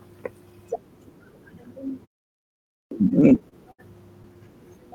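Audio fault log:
2.62–2.91 s, clipped start after a pause: After a 0.64 s silence, the speech comes back abruptly and the first 292 ms are gone. The output device seems to have dozed off during the gap and needed that long to wake and lock before anything got through.
3.09–3.80 s, repeated stalls (stutter): Here the speech drags and hiccups through seven separate holds, 150 ms in total and the longest 67 ms, so about a fifth of that stretch is filler. Packets kept arriving late, the jitter buffer kept running dry, and the receiver stretched the last sound each time. Nothing is actually lost.
4.22 s, short stall from a late packet: One brief 17 ms hold where a packet showed up late and the buffer ran empty for a moment. The last sound gets stretched slightly, then playback resumes from the same spot with nothing missing.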